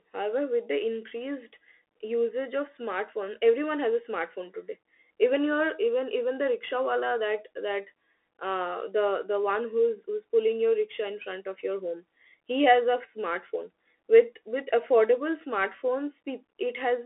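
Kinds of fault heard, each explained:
Bluetooth CVSD headset codec: the speech is confined to about 300 Hz to 3.5 kHz with nothing above 3.8 kHz. A one-bit delta coder, consistent with 64 kbps CVSD, adds plainly audible granular hiss and scratchy sibilants, which clean telephone band-limiting alone lacks.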